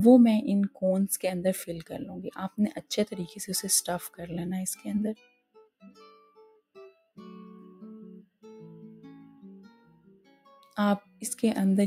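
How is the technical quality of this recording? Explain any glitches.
The technical quality is compromised by a speech-oriented noise suppressor left active on non-speech audio.

Noise suppressor applied to music or sounds: throughout the clip, the suppressor treats sustained tones, ambience and reverb as noise and pulls them down, with level swinging by around 10 dB. It sounds pumping and thinned. On a waveform, the envelope breathes unevenly, and a spectrogram shows sustained bands fading while onsets stay bright.

Sound cut by the noise suppressor: the worst dips are at 1.7–3.45 s (down about 16 dB), 4.1–4.34 s (about 13 dB), 5.14–6.76 s (about 16 dB), 9.7–10.52 s (about 12 dB) and 11.02–11.22 s (about 11 dB). Held and decaying material is clamped as if it were noise, so tails sink abruptly. These show as hollowed, darkened patches in the spectrogram and as sudden envelope notches in the waveform.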